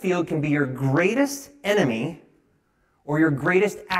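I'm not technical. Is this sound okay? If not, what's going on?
No, it isn't. The speech has a rough, slightly doubled quality the whole way through, from start to finish. That's channel delay (comb filtering): one side arrives around 20 milliseconds late, and when both are mixed together, parts of the sound cancel out at regularly spaced pitches.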